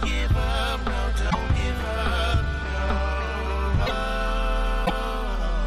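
Three times the audio skips forward and breaks into a brief chirp, burst of noise or short hole, at 1.29 to 1.35 s, 3.85 to 3.91 s and 4.85 to 4.91 s, each lasting about two 26.1 ms MP3 frames. The likely cause is a broken MP3 bit reservoir: frames were lost, so the frames after each gap reached back for borrowed data and decoded someone else's bytes instead, giving the jump and the short glitch.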